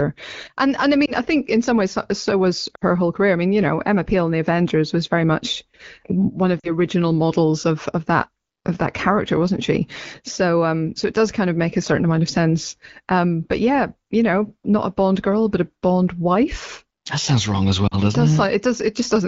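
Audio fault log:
1.06–1.11 s, 2.76–2.84 s, 6.59–6.70 s, 17.88–17.95 s: lost AMR speech frames. There are gaps of 20, 60, 40 and 40 ms, after "and I", between "very much one of" and "original models of of", and after "sounds wrong as". Each time the decoder repeats the last good pitch and vocal-tract settings at falling gain, so the single lost frame gives a brief dip or warble, and the longer runs drop to near silence within two frames. The spectrogram shows frozen harmonics fading over that stretch, and the waveform narrows before the sound returns.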